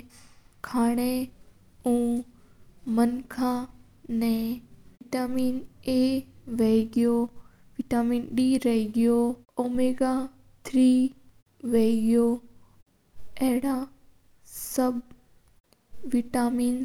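No technical faults are audible.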